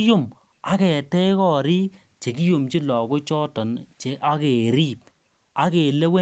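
No faults in this speech; the top end stops at 8 kHz, which fits a wideband call codec after normal call microphone processing.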